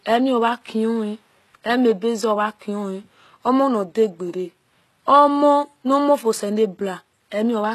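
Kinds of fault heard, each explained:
HE-AAC compression: Throughout the speech, the treble sounds synthetic. The top end stops at about 12.3 kHz, and the damage is plainly audible, most likely from HE-AAC at a low rate that fits roughly 16 kbps. The codec keeps only the lower spectrum and rebuilds the highs by copying lower bands upward under a coarse envelope. The upper harmonics therefore fail to line up with those below, and s sounds turn gritty and lispy.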